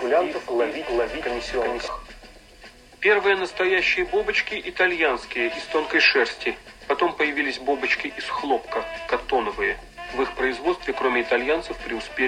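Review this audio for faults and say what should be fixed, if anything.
Doubled audio track from the start to 1.88 s: a full-band copy of the sound trails roughly 400 ms behind at about equal level, with no decay, then stops abruptly. It likely comes from a second, slower capture path or an overlapping edit. To prevent it, route each source through only one capture path, and check edit points so no region is left holding two offset copies.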